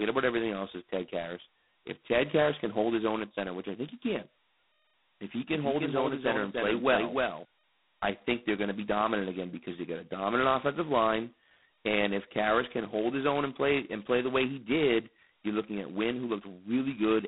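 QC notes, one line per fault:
Throughout: G.726 ADPCM at 16 kbit/s, two bits per sample of prediction error, leaving a harsh rasping hiss that tracks speech level; band 150 Hz–3.7 kHz, nothing above 3.9 kHz.
5.51–7.45 s: doubled audio track, full-band copy roughly 300 ms late and about 5 dB down, no room colour, abrupt edges; after "if he", ends before "I think they're going"; likely a second, slower capture path.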